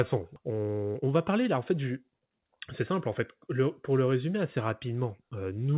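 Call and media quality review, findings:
Skip ahead, 0.36–0.38 s: speech jumps forward with no fill and no audible gap; about a second of audio is gone. Probable component: jitter buffer. Late packets arrived behind newer audio, and the buffer dropped the backlog, splicing both sides together directly.

Jitter buffer speed-up, 0.50–2.91 s: speech runs about 113% speed at unchanged pitch and sounds hurried. Buffer overfilled after the skip; the receiver trimmed short pitch-period slices repeatedly, shedding roughly a third of a second of delay. Band limit at 4 kHz fits G.711 mu-law.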